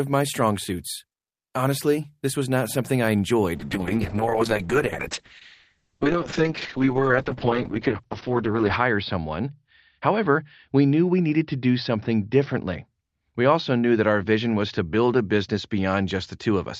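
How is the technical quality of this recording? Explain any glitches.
The recording has one fault: a call bitrate drop. It begins at 3.56 s and lasts to the end. The call's bandwidth estimate fell, so the encoder cut its rate from 32 kbps to 7 kbps. It stays at the lowest rate for 5.2 s. At that rate the codec narrows the audio band from 20 kHz to 6 kHz. The speech loses its top end and sounds muffled. Coarser coding also makes it rough and watery.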